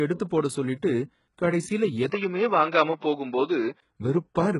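From the start of the speech, the treble sounds synthetic: s sounds come out gritty and lispy, and nothing reaches past 11.1 kHz. This is likely HE-AAC compression, heavily stressed, and the degree of damage fits a low bitrate around 12 kbps. The upper band is rebuilt from copied lower harmonics rather than coded directly. Unlike plain low-pass filtering, the top stays bright but sounds metallic and misaligned, and it does this for the whole clip.

At 2.1 s a gap of about 20 ms interrupts the sound. After it the tone turns boxy and dull, with nothing above 5.8 kHz and a new hiss sitting roughly 45 dB below the speech. At 3.82 s the fuller sound returns. The loudness stays about the same throughout, and the change is abrupt rather than gradual. That points to an input switched to a poorer device rather than to filtering or a codec adapting.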